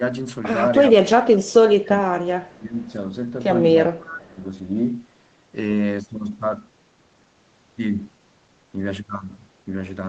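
At 2.85 to 2.92 s there is a faint echo leak. A delayed copy of the speech returns about 0.39 s late, roughly 40 dB down. A loudspeaker echo canceller likely missed it.

From 3.92 to 4.41 s the speech is suppressed in double talk. It dips by about 20 dB for half a second. The canceller likely mistook the talker for echo.

Inside that dip, at 4.06 to 4.19 s, the echo leaks again. It arrives with the same 0.39 s delay and is clearly louder, about 20 dB below the speech.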